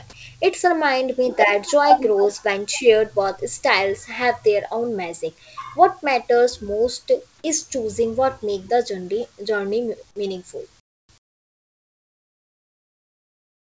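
Comfort noise in place of the background, from 10.80 to 11.09 s and again from 11.18 s to the end: the real background drops to a flat, featureless hiss, about 25 dB and then about 21 dB quieter. This is likely because transmission paused during silence and the receiver synthesised noise instead.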